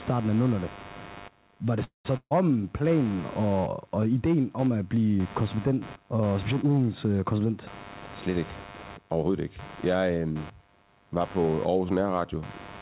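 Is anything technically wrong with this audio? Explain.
Yes, there are several faults in this speech.

Computer activity noise runs throughout: a buzzing, chirping texture pulsing at roughly 100 per second, sitting about 20 dB below the speech. It follows the computer's processing load, not the talker, because that load is shifting the audio circuit's shared ground.

A call audio freeze occurs at 1.84 to 2.07 s. The sound stretches into a fading buzz, then about 130 ms of silence, and resumes with nothing lost but 207 ms inserted. The likely cause is delayed packets leaving the jitter buffer empty.

A burst of packet loss follows at 2.17 to 2.33 s. The last sound is briefly held and faded, with about 60 ms of silence, and the speech resumes roughly 140 ms further on. Consecutive packets were lost or came too late, so that stretch is missing.

Jitter buffer speed-up appears at 8.95 to 9.30 s (117% speed) and 9.76 to 10.27 s (114%). 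The speech sounds hurried, but the pitch stays the same. After a backlog built up, the receiver cut roughly 70 ms of pitch-period slices from each stretch to reduce delay.

The narrowband sound, with nothing above 4 kHz, comes from the call path's G.711 A-law codec and fits a 64 kbps stream.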